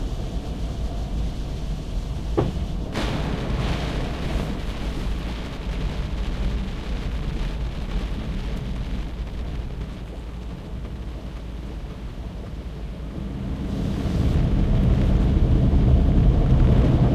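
No technical faults occur anywhere in this recording of sounds, so there is nothing to describe in time order.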